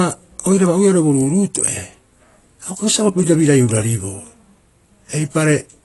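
Throughout the speech, nothing is present above about 11.5 kHz, and the coding damage is plainly audible across the whole clip. The likely cause is AAC compression, most plausibly AAC-LC at a low bitrate consistent with roughly 32 kbps. At that rate the encoder cannot afford to code the upper spectrum, so it drops everything past the cut-off and quantises the remaining bands coarsely, which removes the top end and leaves the speech sounding dull and processed.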